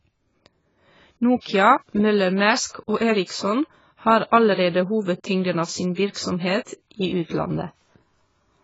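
Throughout, the speech sounds dull and warbly, likely from heavy AAC compression; a spectrogram shows a hard ceiling at 7.6 kHz.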